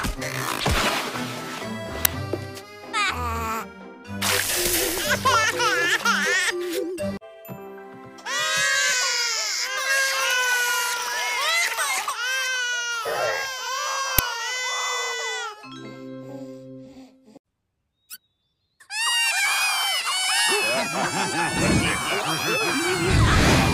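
At 2.05 s and again at 14.19 s a 5 ms uninitialised buffer plays: a block of memory was sent to the output before any audio had been written into it, so whatever stale data sat there became samples. Each is heard as a sharp, loud crack of digital noise. On the waveform it is a narrow slab of jagged values; on the spectrogram, a thin vertical stripe spanning the whole frequency range.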